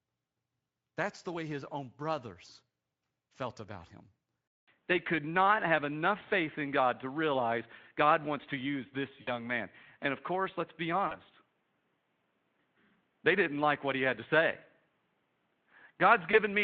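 Speech recording in which, just after "felt about him" at 4.48 s, the input likely switched to a poorer device: after about 200 ms of silence, the sound turns boxy with nothing above 3.8 kHz, a small level change and faint new background noise. Packet loss hidden by the speech decoder's concealment also occurs at 9.21–9.30 s (60 ms lost), 11.07–11.16 s (40 ms) and 16.31–16.38 s (20 ms), each briefly smearing the speech into a fading buzzy tone or coloured noise. The Speex coding adds only light roughness of its own.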